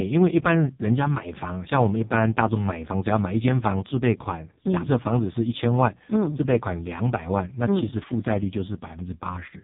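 Speech here has passed through the AMR narrowband mobile codec for its whole length, and the heavy damage points to one of its lowest bit-rate modes, around 4.75 kbps. At 8 kHz sampling, nothing above about 3.8 kHz survives, leaving the voice thin and band-limited. With so few bits per 20 ms frame, the vocal-tract model is driven by very sparse pulses, so the voice comes out buzzy and synthetic rather than natural.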